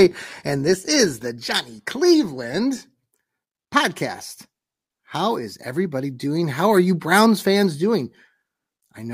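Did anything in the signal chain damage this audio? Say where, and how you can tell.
No, nothing along the chain seems to have left a mark on this speech; I can't hear anything wrong at any stage.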